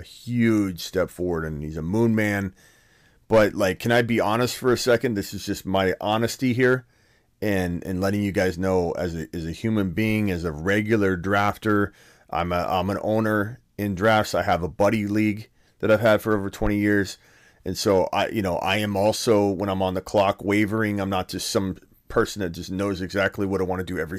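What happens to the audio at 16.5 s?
At 16.5 s the speech is hard clipped, as it is across the whole clip. It is driven about 7 dB past what the stage can pass, so a small fraction of peaks are sliced flat. The result is crackle on loud syllables, sharper and brighter than the gentler thickening of soft saturation.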